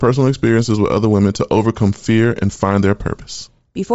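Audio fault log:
Throughout: Bluetooth LC3 compression. The speech has a plainly audible breathy, grainy edge because the upper spectrum is filled with noise rather than simply cut off. That sets it apart from the dull muffling of a plain low-pass. This likely comes from LC3 coding, and the sound fits 32 kbps with 7.5 ms frames.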